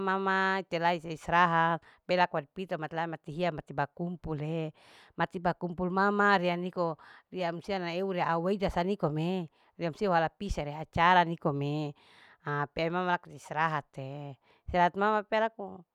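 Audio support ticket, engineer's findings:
No technical faults found on listening; the speech signal holds steady throughout with nothing attributable to the capture, processing or transport chain.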